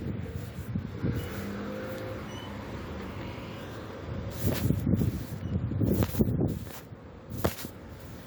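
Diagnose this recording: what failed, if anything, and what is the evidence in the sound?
Nothing here points to a failure at any stage of the chain, so there's no fault to diagnose in this recording.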